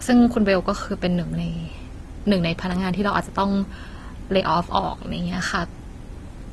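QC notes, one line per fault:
Throughout: transcoding between lossy codecs. The speech was likely encoded with one lossy codec and then re-encoded as Opus at low bitrate. The second encoder spends bits on the first one's artefacts, so the two kinds of smearing and swirl stack, and nothing remains above 12.1 kHz.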